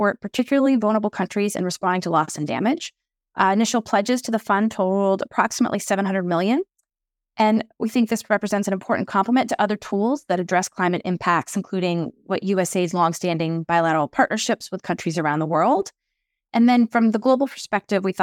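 At 15.82 s, just after "with countries around the", an underrun with held sample briefly freezes the speech for about 5 ms. The output buffer emptied and the converter held its last value, so the waveform sits flat at that level instead of dropping to zero. This is why there is barely any click at the start, unlike a silent dropout. Because no audio was lost and playback resumes where it paused, the restart is also soft.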